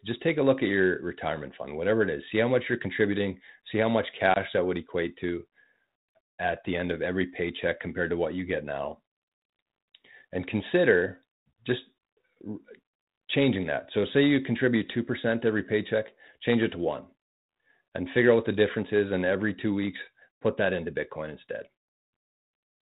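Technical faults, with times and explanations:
4.34 to 4.37 s, packet loss on an ADPCM call: right after "contributing see how much", a hard-edged gap of about 20 ms cuts the speech to silence, and when it resumes with "that would equate to" there is a moment of roughness before it settles. The missing stretch fits roughly one lost packet. Because G.726 at 32 kbit/s codes only differences from an adaptive prediction, the receiver's predictor and step size lose track of the sender's during the gap and take some tens of milliseconds to realign.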